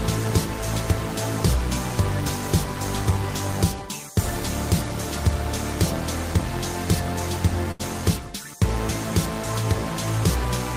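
At 7.71 s a packet failed to reach the receiver on time, so its jitter buffer drained and it had to hold the most recent sound to cover the gap. This short stall from a late packet lasts until about 7.82 s, with roughly 81 ms stretched out before playback picks up exactly where it paused. Nothing is lost, but the held sound lingers unnaturally with a faint buzz or dip, and everything after it arrives 81 ms later.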